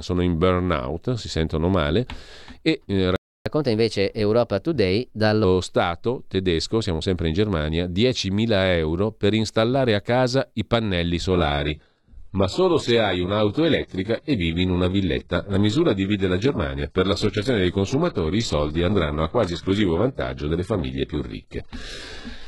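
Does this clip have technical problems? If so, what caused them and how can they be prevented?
Yes. There is a playback stall at 3.16 s. The speech stops dead for about 0.30 s and resumes at 3.46 s. The player most likely ran dry of buffered data or had its audio thread blocked. A larger playback buffer and a high-priority audio thread prevent this.

Catch-up at higher speed follows from 3.46 to 5.44 s. The player resamples its backlog to regain the lost time. Playback runs at 1.15 times normal speed, so pitch rises about two semitones. Then both settle back. Letting a buffered stream resume at normal speed, or catching up with pitch-preserving time stretching, avoids this.

An adaptive stream at a lower bitrate takes over at 11.31 s and lasts to the end. The change is abrupt, with no gap. Nothing is left above 11.5 kHz, the top end turns synthetic, and codec artefacts grow. This fits a drop to a very low-bitrate HE-AAC rendition, around 12 kbit/s, after the connection slowed. 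A steadier connection, or a higher minimum bitrate in the streaming ladder, prevents this.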